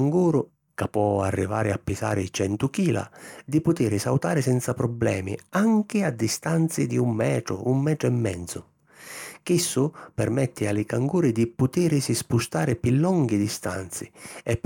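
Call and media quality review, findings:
No audible faults in the speech signal: levels, continuity and timing hold steady throughout, with nothing in the signal path calling for a ticket.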